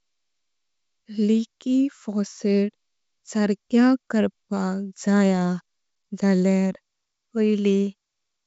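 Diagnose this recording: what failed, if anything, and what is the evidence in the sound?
Nothing failed; no fault found.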